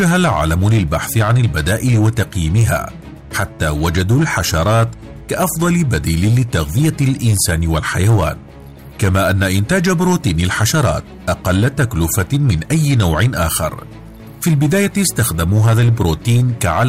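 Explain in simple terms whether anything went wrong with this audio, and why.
Hard clipping runs through the whole clip: the loudest peaks are sliced flat, adding a harsh crackle only on loud moments, unlike steady hiss that stays constant.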